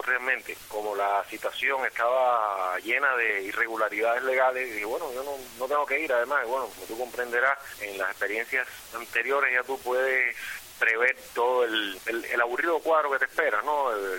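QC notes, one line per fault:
6.90 s, 8.78 s: repeated buffer. About 11 ms of sound plays twice with a hard join, heard as a brief click or buzz, which fits a 512-sample buffer being replayed when new data arrived late.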